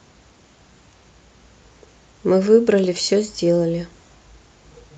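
No technical faults can be heard in this speech.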